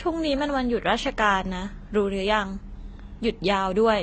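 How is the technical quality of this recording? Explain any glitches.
Technical quality is poor, with one fault present throughout. AAC compression damage runs the whole clip. Nothing sounds above 8.5 kHz, so the speech is dull and smeared. The cause is likely heavy AAC-LC coding, fitting a bitrate near 24 kbps.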